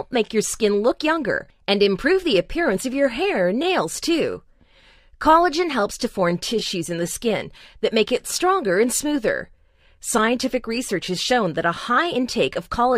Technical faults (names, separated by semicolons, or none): none